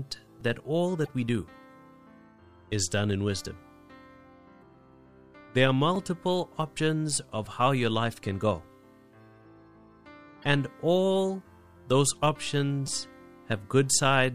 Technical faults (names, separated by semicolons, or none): repeated buffer; damaged data in a compressed stream